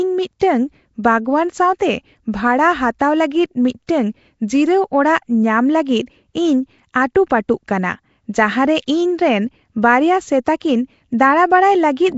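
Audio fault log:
throughout Nellymoser compression. Rough, hissy halo and smeared, underwater tone, with nothing above 7.7 kHz. Likely Nellymoser Asao at around 32 kbps, noise-filling weak bands.
0.40 s, 1.79 s, 2.99 s pre-echo. Brief hiss of 10 to 16 ms precedes sharp attacks, which sound softened. Block-wide quantisation noise leaks ahead of each onset.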